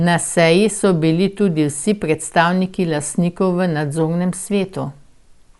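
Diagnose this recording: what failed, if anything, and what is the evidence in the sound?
The codec stage failed, the likely cause being Dolby Digital compression. Throughout the speech, nothing is heard above 11.5 kHz. The sound is dull, with rough, fluttering noise around tones. That fits about 64 kbps, where empty frequency lines are filled with dither noise.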